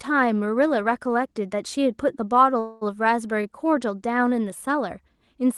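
At 2.59 s the speech stalls for 0.22 s, filled by a fading buzz or hiss. Likely a call audio freeze: the jitter buffer ran dry. Speech then resumes, nothing lost.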